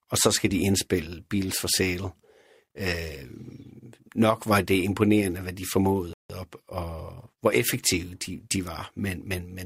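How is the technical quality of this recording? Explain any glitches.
The speech has one glitch, a rebuffering stall. At 6.13 s the sound drops to silence for about 164 ms and resumes at 6.30 s exactly where it left off. The player emptied its buffer and waited for more data. It shows as a flat gap in the waveform and a blank vertical band on the spectrogram.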